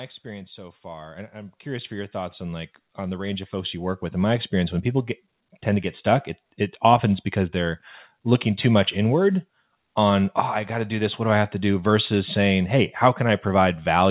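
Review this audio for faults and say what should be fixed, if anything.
Automatic gain rising runs from 0.22 s to 5.13 s: the speech and the background noise swell together by about 19 dB, settling just before "tend to get stuck". The gain control judged the opening input too quiet and raised its gain over several seconds, so the noise floor climbs with the speech on this narrowband path, which carries nothing above 4 kHz. To prevent it, set the microphone's input level correctly before the call starts.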